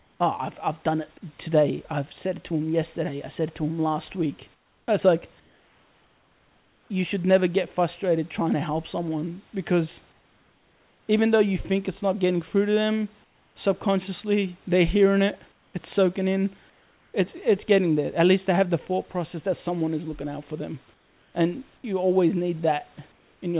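Comfort noise in place of the background fills the pauses in this speech clip at 0.0–0.2, 4.54–6.9, 10.12–11.08, 13.24–13.56 (after "getting through to them"), 15.52–15.74, 16.7–17.14, 20.94–21.34 and 23.12–23.42 s. In most gaps the room noise, about 37–38 dB below the speech, drops about 3–5 dB into a smooth, featureless hiss. The likely cause is discontinuous transmission, where the receiver synthesises noise while the sender is silent. The band stops at 4 kHz, which fits G.711.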